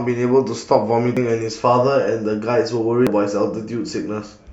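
Audio missing between chunks occurs at 1.17 s and again at 3.07 s. Each time the speech skips abruptly forward, dropping about a tenth of a second, with no gap of silence. This is likely a recorder handling audio in 2-second chunks and losing a piece at each changeover.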